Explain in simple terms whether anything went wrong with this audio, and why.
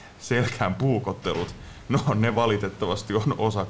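Nothing went wrong with this audio; the faint background noise of the room and the slightly dulled top end from being sent over a call are both normal.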